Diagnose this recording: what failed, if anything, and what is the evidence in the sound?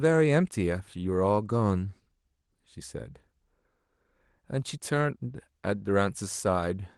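Nothing failed: the speech came over a WebRTC call path whose Opus coding caps the top end at around 12 kHz, and no stage in the chain shows a defect.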